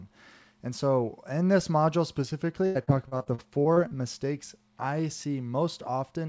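From 2.66 to 3.94 s the speech turns choppy and robotic, with pieces visibly missing. This is repeated packet loss. Packets kept arriving lost or late, leaving a string of short holes, the longest about 90 ms. Each hole was covered by stretching out the last good sound, so roughly a quarter of that stretch is synthetic fill. The call path, which fits G.722 with nothing above 8 kHz, carried the loss through.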